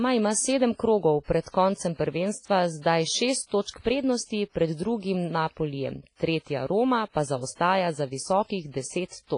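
It's a speech clip, and the whole thing has that washy, ringing quality of heavy transform coding, likely WMA compression. The hiss swells and fades with the voice, and there's nothing above about 10.1 kHz, which fits a low bitrate somewhere around 24 kbps. At that rate the encoder is zeroing weaker spectral lines and letting quantisation noise smear across its long blocks. On top of that you get pre-echo, a short hiss arriving ahead of sharp onsets, so the attacks come out soft and blurred. It shows up at 1.24–1.28 s, right after "ima sedem krogov", then at 1.41–1.46 s and 1.50–1.54 s, just before "koncem prvenstva zdaj šest". After that phrase it appears again at 3.47–3.51 s and 3.62–3.66 s. Each smear runs about 40 to 50 ms, because the noise meant for the loud attack fills the quiet part of the block before it.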